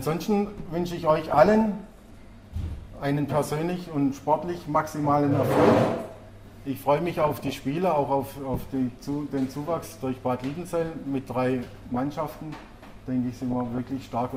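The audio has DAB burbling at 1.10–2.01, 4.55–4.97, 7.17–7.59, 11.78–11.97 and 13.42–14.02 s. Bit errors of roughly 0.4 to 1 percent corrupt MP2 sub-band values, so short noise blips and level jumps appear in single sub-bands, unlike the silent gaps of full dropouts.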